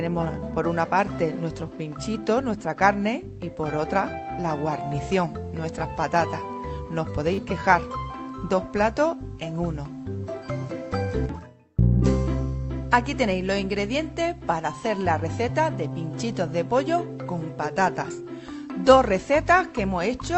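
Short concealed packet loss, 7.33 to 7.40 s: 40 ms of audio never arrived in time, so the receiver extended the preceding sound over the gap, leaving a brief smeared wobble.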